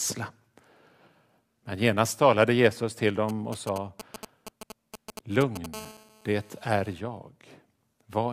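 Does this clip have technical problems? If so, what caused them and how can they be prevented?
Yes. From 3.29 to 5.66 s there are GSM signalling bursts: a galloping dit-dit-dit of short buzzes at 217 Hz, fairly loud at roughly 10 dB below the speech. A nearby 2G phone is exchanging short control transmissions, and the audio circuitry rectifies the radio pulses into audible clicks. Keeping mobile phones switched off or in flight mode and away from the microphone, cables and preamp prevents this.

From 5.74 to 6.93 s a GSM phone buzz follows, a steady, raspy 217 Hz tone with many harmonics, unrelated to the speech and about 21 dB below it. A nearby 2G phone is in an active call, pulsing its transmitter 217 times a second, and the circuit demodulates that pulsing into a continuous buzz. Shielded, balanced cabling and distance from any active handset prevent it.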